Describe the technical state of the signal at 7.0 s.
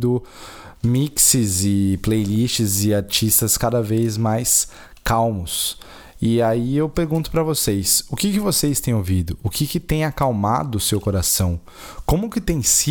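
At 7.0 s the speech plays through intact, with no dropout, distortion or other fault to be heard at that moment.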